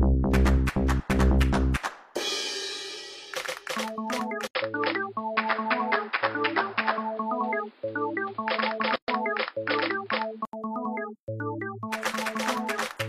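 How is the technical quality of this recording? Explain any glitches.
The recording has two distinct faults, one lasting several seconds and one brief dropout inside it.

From 4.47 s to 10.53 s the sound turns dull and boxy, with nothing above 5.2 kHz and a new noise floor roughly 30 dB below the signal, while overall level stays about the same. An 80 ms silence marks the change. This is likely an input switched to a poorer device, such as another microphone or a headset's call profile, whose narrower band and own noise replace the original path until full bandwidth returns at 10.53 s.

At 8.96 s a gap at a join of encoded pieces opens: a 124 ms gap cuts into continuous sound, with its edges smeared by the codec, before the audio resumes where it stopped. It comes from separately encoded segments being butted together without trimming, so one segment's padded final frame and the next segment's start-up delay both remain as dead air.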